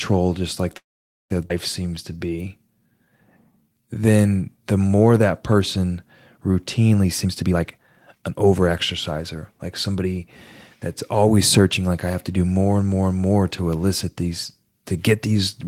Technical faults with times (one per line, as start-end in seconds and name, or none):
0.77-1.32 call audio freeze
1.48-1.52 skip ahead
1.82-4.30 jitter buffer slow-down
7.03-8.69 jitter buffer speed-up
9.11-10.06 jitter buffer speed-up